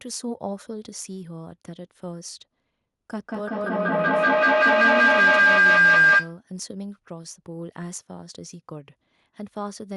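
A speech recording with feedback howl from 3.1 to 6.42 s. A tone near 1.5 kHz swells to about 16 dB above the speech, with the loop repeating roughly every fifth of a second. The spectrogram shows a bright horizontal band there, and the waveform balloons into a dense envelope.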